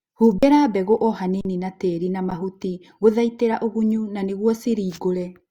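At 0.38 to 0.43 s and again at 1.41 to 1.45 s, the speech freezes for about 43 ms each time in an underrun with held sample: the output buffer ran dry and the converter held its last value, so the waveform goes flat and the sound stops. At 2.30 s a shorter hold of about 11 ms follows. Roughly 40 ms and 10 ms of live audio were lost. The lengths fit buffers of 2048 and 512 samples.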